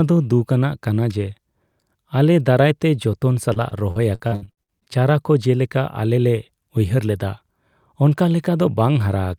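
From 3.53 to 4.86 s the speech suffers repeated packet loss, with a robotic sound. Around a dozen short holes open in quick succession, the longest about 57 ms. Each hole is patched by stretching the last bit of sound forward, and these patches fill roughly a quarter of the stretch. The result is choppy, robotic speech with pieces dropped out. Clean audio returns just before "ᱪᱟᱨᱟ ᱠᱚ ᱡᱮᱞᱮᱠᱟ".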